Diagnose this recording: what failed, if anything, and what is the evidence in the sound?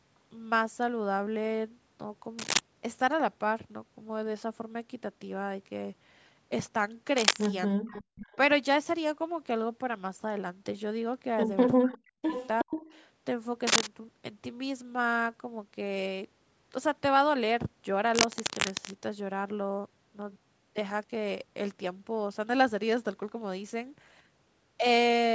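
Analogue wiring: bursts of scratching noise at 2.39–2.59, 7.17–7.47, 13.67–13.87 and 18.14–18.91 s, up to about 5 dB over the speech. This cable scratch noise likely comes from a worn contact being moved.

Call processing: the speech dips by up to about 40 dB at 7.79–7.96, 11.77–12.32 and 12.64–12.71 s. This is likely speech suppressed in double talk by the echo canceller.

Call processing: a delayed copy 365 ms late appears at 7.93–8.36, 11.92–11.98 and 12.27–12.85 s, about 10 to 25 dB down. This echo leak likely escaped the echo canceller.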